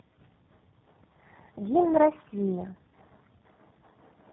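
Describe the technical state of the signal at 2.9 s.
At 2.9 s the speech sounds rough, muffled and warbly, with nothing above about 3.8 kHz. The cause is tandem speech coding, present across the whole clip rather than at that moment alone. The speech passed through three low-rate speech codecs in a row: GSM full rate at 13 kbit/s, GSM full rate again, then G.729A at 8 kbit/s, with G.711 mu-law links in between. Each coder re-encoded the previous one's already damaged output, so the artefacts built up.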